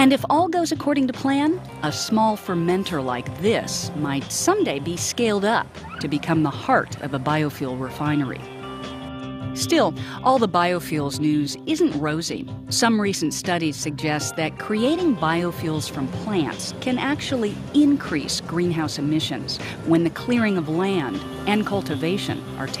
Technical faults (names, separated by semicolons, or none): none